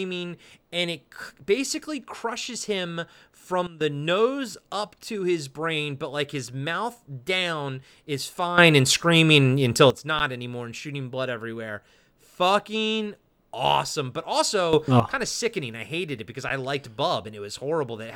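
A speech recording with two kinds of fault. Sudden gain jumps occur at 3.67–3.81 s, where the speech and the background noise drop together by about 14 dB, at 8.58–9.90 s, where both rise by about 12 dB, and at 14.73–15.00 s, where both rise by about 11 dB. Each level shift is abrupt at its start and end rather than faded, which is likely a digital gain change applied without a ramp. Underruns with a held sample occur at 10.19 s and 16.49 s. Each is a 10 ms flat stretch where the output buffer ran dry and the converter held its last value. In both cases playback resumes where it stopped, with no audio lost, so each gap is a brief dropout ending softly rather than with a sharp click.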